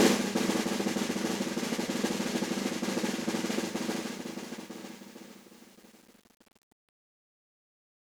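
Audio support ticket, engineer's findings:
Truncation distortion on the fade-out, 3.55 s to end. Fade stage keeping only 8 bits, no dither, so the tail steps into coarse square levels. Music goes gritty as it nears the bottom step. Fade starts around 3.5 s.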